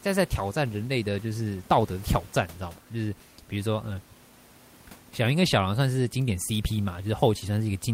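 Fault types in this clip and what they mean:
No technical faults can be heard in this speech.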